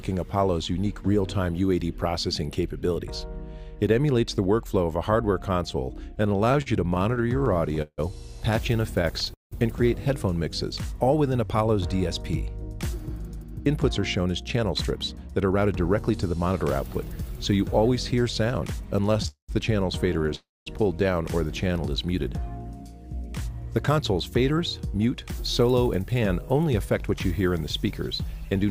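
From 6.15 to 9.53 s, packets kept arriving late and the jitter buffer repeatedly ran dry. The result is repeated stalls (stutter): 23 gaps filled by continuing the last sound, the longest 178 ms, so the audio drags and hiccups for about a sixth of that stretch.

From 12.63 to 17.60 s, the jitter buffer held excess audio and trimmed tiny pitch-period slices to catch up. This jitter buffer speed-up runs the sound at 105% speed, dropping about a third of a second, so it feels hurried at unchanged pitch.

Between 19.13 and 20.33 s, about five isolated packets went missing or late. These scattered short gaps, each only a few milliseconds and none much over 15 ms, were patched over and leave ticks and smears.

Around those, two call audio freezes occur at 19.28 to 19.51 s and at 20.35 to 20.68 s. In each, the sound stalls into a fading continuation and then silence, about 110 ms of silence in the first and 210 ms in the second. 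It then resumes where it stopped, adding 208 ms and 313 ms of delay. The likely cause is packets held up in transit.

From 23.50 to 28.65 s, a second jitter buffer speed-up again runs the sound at 105%, cutting about a third of a second and giving it a rushed feel.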